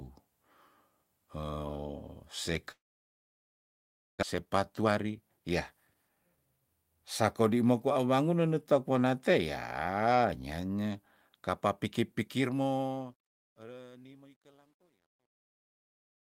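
Speech runs through three separate faults. From 2.71 s to 4.25 s there is a long network dropout. The last sound before the gap is stretched into a brief buzz that dies away, and then almost all of the stretch, about 1.4 s, is plain silence. When the speech resumes, about a second of it is simply gone. A short packet loss would be patched over in a few tens of milliseconds; here the concealment gives up and the gap is audible. The likely cause is a network outage rather than an edit, since an edit would not leave that fading tail.

Right after it, from 4.34 s to 6.46 s, a jitter buffer speed-up makes the talker sound rushed, running at about 122% speed while the pitch stays where it was. The receiver is trimming small pitch-period slices to shed roughly half a second of extra delay built up during the outage. Because the pitch doesn't rise, this is not a sample-rate or playback-speed error; only the timing is compressed.

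Over the closing stretch, from 12.21 s to the end, a fade-out carries truncation distortion on a fade. The gain stage keeps only about 11 bits with no dither, so as the level sinks the waveform coarsens into steps. From 13.52 s the tail turns gritty. A steady hiss would stay constant through the fade, while this roughness grows as the level falls.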